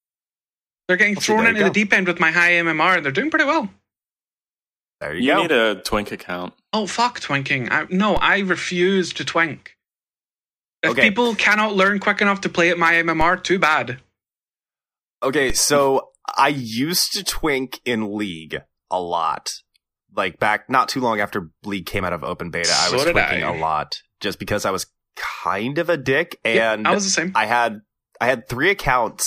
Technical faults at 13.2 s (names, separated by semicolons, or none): DC step